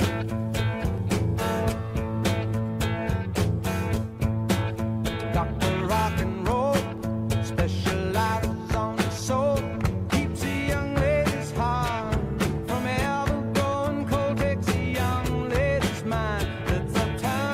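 No technical faults can be heard anywhere in this audio.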